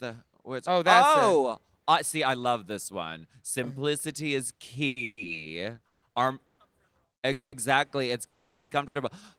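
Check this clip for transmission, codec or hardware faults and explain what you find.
Two kinds of transmission fault affect the speech, both from packets arriving late.

Short stalls from a late packet, at 4.87–4.98 s and 8.87–8.97 s: the sound is briefly held, with a slight buzz or dip, for about 90 ms and 80 ms. The jitter buffer ran empty, so the receiver stretched the last sound until the packet arrived, then resumed with nothing lost.

Call audio freezes, at 5.04–5.19 s, 5.87–6.04 s, 6.46–6.60 s, 7.32–7.54 s and 8.26–8.71 s: each is a buzz or hiss that fades into silence, lasting 120 to 430 ms, the longest at 8.26 s. The likely cause is packets held up in the network, emptying the buffer. The speech then resumes where it stopped, with a gap inserted.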